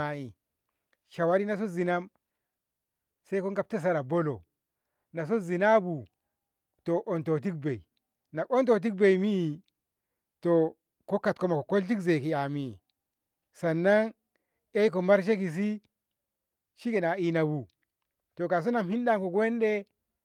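No technical faults are audible anywhere in the speech recording.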